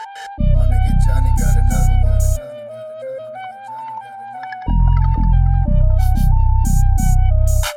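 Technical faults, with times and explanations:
Throughout, channel delay (comb filtering): one channel arrives roughly 1.5 ms behind the other, and summing them to mono cancels their shared content at evenly spaced frequencies starting near 400 Hz. The result is a hollow, phasey colouring with fixed notches that never move.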